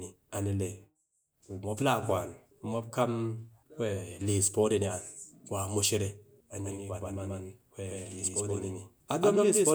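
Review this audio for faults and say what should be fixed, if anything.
Doubled audio track from 6.64 s to the end: a second full-band copy of the speech cuts in abruptly, about as loud as the original and roughly 150 ms behind, with no decay or room colour. It is likely a slower second capture path mixed in alongside the first. To prevent it, record the source through one capture path only and check edits for overlapping duplicate regions before export.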